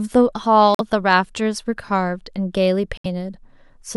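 At 0.75 s the speech drops to dead silence for about 66 ms, ending at 0.81 s, and at 2.97 s a second hole of about 84 ms runs to 3.06 s. These are corrupt frame muted faults: damaged compressed frames were rejected by the decoder and replaced with silence. The lengths fit two and three codec frames of roughly 30 ms. Unlike a buffer dropout or skip, the gaps start abruptly, contain true silence rather than smeared or repeated sound, and the timing of what follows stays in place.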